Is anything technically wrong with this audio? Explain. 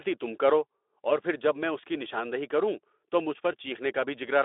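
No, nothing in this speech clip is technically wrong. It carries the narrow, telephone-like band of a Speex link, roughly 300 Hz to 3.6 kHz with nothing above 3.8 kHz, and its light coding texture fits a rate of about 15 kbps.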